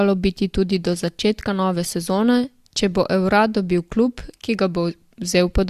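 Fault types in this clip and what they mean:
Nothing in the speech stood out as a problem on listening.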